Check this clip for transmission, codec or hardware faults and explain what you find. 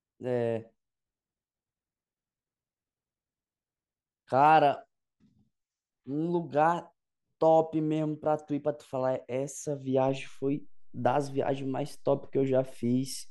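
One fault is present: a DC step at 10.09 s. The signal's baseline abruptly shifts by about -43 dBFS, as happens when converter calibration changes or an offset-carrying input is switched into the path, and that offset persists to the end. It is heard as one low thump, with the speech continuing unaltered.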